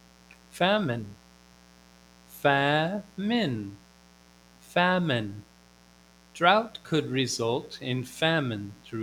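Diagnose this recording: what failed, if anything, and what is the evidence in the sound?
The analogue wiring let mains buzz in: a steady, raspy buzz runs under the whole clip, sitting roughly 30 dB below the signal. It's built on 60 Hz harmonics reaching up into the kilohertz range, the kind of spiky interference a dimmer, rectifier or unshielded cable couples in.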